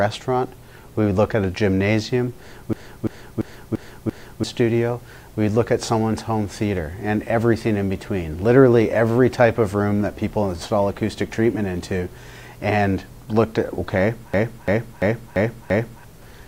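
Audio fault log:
2.73–4.44 s and 14.34–16.04 s, system hang loop: a 341 ms fragment stutters five times at 2.9 Hz as the system froze and the hardware replayed its buffer (which fits 16384 samples), losing about a second and a half of audio each time.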